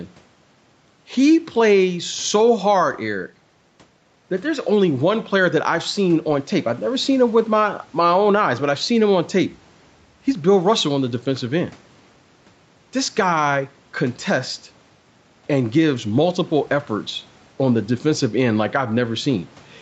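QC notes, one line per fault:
throughout, gain pumping: the gain swings by around 10 dB, leaving loud and soft parts closer in level and the sound squashed, likely a fast limiter reacting to excessive input gain.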